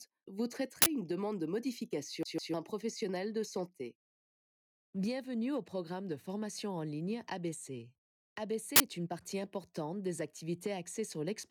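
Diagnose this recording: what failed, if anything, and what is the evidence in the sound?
A short, even stutter from 2.23 to 2.54 s: a fragment about 0.15 s long plays twice, with a brief mute at each jump. This is a CD stuck on one turn, a playback fault. A scratch keeps throwing the laser back one track, replaying the same slice.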